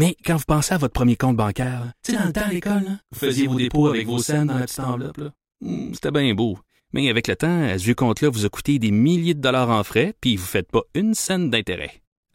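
Speech, with channel delay (doubling) from 1.63 s, just after "à votre premier compte", to 5.97 s, before "c'était bien beau". One channel runs 40 ms behind the other, and summing to mono places that late copy alongside the original at equal level, producing an audible doubled slap.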